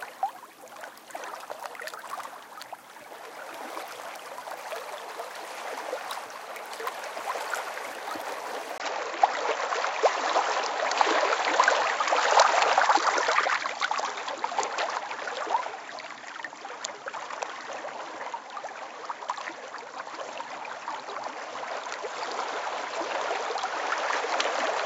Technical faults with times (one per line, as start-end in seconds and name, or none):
8.78-24.86 input switched to a poorer device